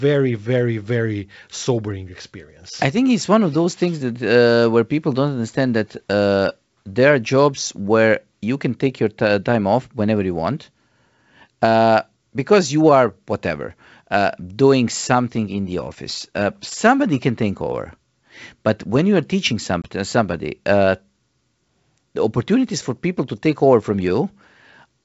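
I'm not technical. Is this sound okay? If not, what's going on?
No. Just after "you are teaching some", at about 19.82 s, there is packet loss on an ADPCM call. About one packet of the call went missing, and the receiving end briefly lost track of the sound's level. You hear a sudden 20 ms hole, then "uh somebody uh" returns with brief roughness.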